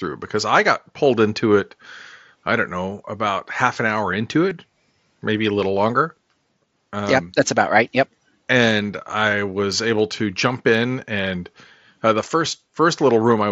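At 4.50 s, concealed Bluetooth headset packet loss: about 15 ms of speech, consistent with two lost frames, is replaced by a repeated recent waveform, giving a brief patch.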